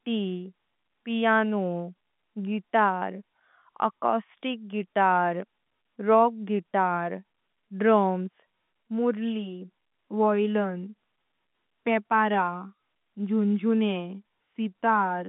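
Speech over a telephone line, with no technical faults.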